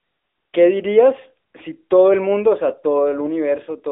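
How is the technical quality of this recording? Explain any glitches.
The recording has one fault, present throughout: AMR narrowband mobile codec damage. The speech passes through a 300 Hz to 3.6 kHz phone band, and vocal-tract modelling coding gives a plainly buzzy, synthetic tone, which fits a mid-rate mode around 10 kbps. On a spectrogram, nothing appears above 3.7 kHz.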